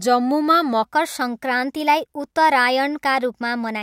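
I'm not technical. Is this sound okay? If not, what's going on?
No, from 0.84 s to the end there's a section at the wrong speed: the speech runs 1.12 times too fast and about two semitones higher, likely from a clock mismatch.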